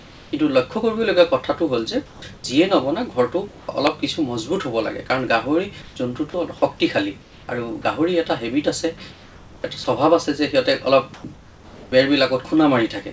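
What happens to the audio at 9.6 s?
At 9.6 s you're inside a stretch from about 9.12 to 9.86 s where the real background drops out and a steady, featureless hiss takes over for roughly half a second. That's comfort noise in place of the background, likely from discontinuous transmission filling the pause synthetically.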